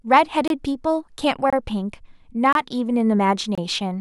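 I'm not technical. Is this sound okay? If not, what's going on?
No. There is a gap between chunks at 0.48–0.50, 1.50–1.53, 2.53–2.55 and 3.55–3.58 s. The speech arrives in one-second pieces, and each join leaves a 25 ms silent hole. No speech is lost, but it briefly stops.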